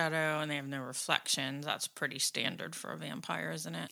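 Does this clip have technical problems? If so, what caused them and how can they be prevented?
No, no technical faults heard.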